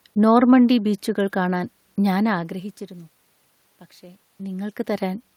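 Nothing's technically wrong with this bit of speech; the room noise in the background belongs to the space itself, and the level shifts around the two- and four-second marks are just the talker moving nearer or farther from the microphone.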